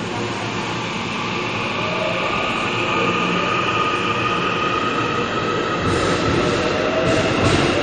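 The audio was likely squeezed through MP3 compression at a low bitrate, one that fits roughly 48 kbps, and the damage runs throughout: everything above 11.1 kHz is gone, weak frequency lines flicker in and out to give a watery swirl, and sharp attacks smear.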